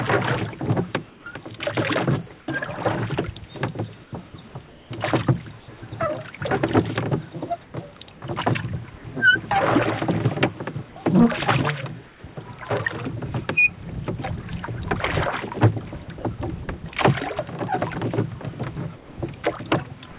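Comfort noise in place of the background appears at 1.1 to 1.26 s, 2.4 to 2.48 s, 4.04 to 5.68 s (about 380 ms replaced in all), 7.64 to 7.74 s and 12.08 to 12.24 s. In each gap the real ambience gives way to smoother, featureless hiss. Where the background sits about 24 to 25 dB below the loud parts, that hiss is about 4 to 5 dB quieter. Unlike a dropout, the gaps never go silent. The likely cause is discontinuous transmission filling the pauses with synthetic noise.

Sound chopped by the voice detector occurs from 16.04 to 16.84 s. Across this stretch the sender likely switched on and off repeatedly, leaving two or more holes (about 100 ms replaced in total) where quieter parts of the sound were swapped for fill. Repeated flicker, rather than one clean gap, separates this from a single drop.

Sound dropped by the voice detector occurs from 18.96 to 19.18 s. About 220 ms is replaced, including about 90 ms of real sound that the detector likely mistook for background. 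Steady noise or near silence takes its place, and the sound returns only when the detector triggers again. This happens once, with no on-off alternation.

The whole clip has nothing above 4 kHz. That points to a G.711 mu-law call codec at 64 kbps.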